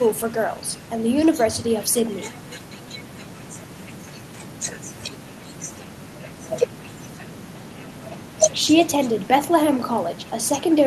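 No technical faults can be heard anywhere in the recording; the signal stays steady and intact throughout.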